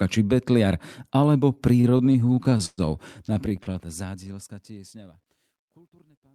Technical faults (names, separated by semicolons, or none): repeated stalls (stutter); truncation distortion on a fade; jitter buffer slow-down